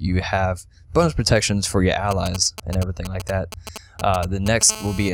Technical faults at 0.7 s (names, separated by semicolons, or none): none